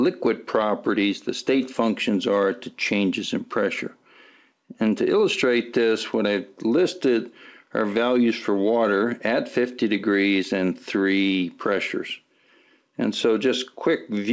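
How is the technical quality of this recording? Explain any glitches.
No glitches to point to here, just the expected character of a call path with nothing above 8 kHz, which fits a G.722 codec at 64 kbps.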